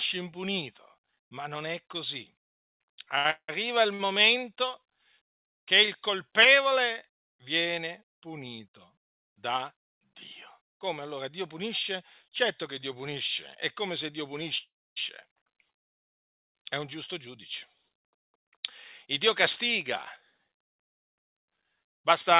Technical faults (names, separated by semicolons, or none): repeated stalls (stutter); call audio freeze; jitter buffer speed-up